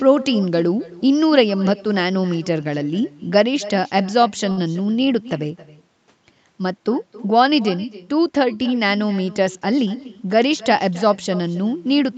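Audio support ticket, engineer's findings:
Faint, hollow repeat trailing all speech throughout, about 19 dB down, roughly 300 ms behind. Echo with no canceller: far end plays the call on a loudspeaker, its microphone picks it up, nothing removes it, so it returns after the network round trip.

Sound held too long, slight buzz or dip, 4.51 to 4.59 s. Short stall from a late packet: jitter buffer ran dry, receiver stretched the last sound by 58 ms until the packet arrived, then resumed. Nothing lost, but playout delay grew 58 ms.

Hurried delivery, pitch unchanged, 9.56 to 10.16 s. Jitter buffer speed-up: buffer overfilled, receiver cut repeated pitch-period slices, about 70 ms total, to reduce delay. Playback ran at 111% speed through that stretch.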